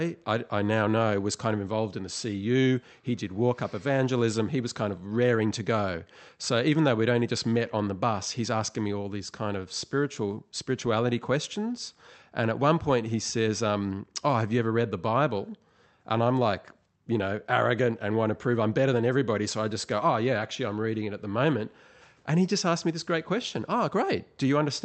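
The speech carries no technical faults, and what can be heard of the call path is consistent with a WebRTC chain using the Opus codec, with the high end rolling off at around 8 kHz as that codec setting would give.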